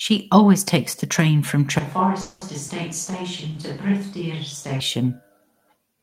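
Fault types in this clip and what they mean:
Switch to a distant microphone: from 1.79 to 4.80 s the sound turns roomy and thin, drops about 5 dB and picks up more room noise, likely from a farther mic.
Call audio freeze: at 2.21 to 2.43 s the last sound hangs as a fading buzz for about 0.2 s, likely from late packets, then resumes with nothing lost.
Short concealed packet loss: at 2.67 to 2.70 s a brief hole got patched by extending the previous sound, leaving a quick smear or wobble.
Call bitrate drop: from 2.91 to 4.01 s the encoder fell from 32 to 18 kbps, so the sound gets rougher and watery for about a second.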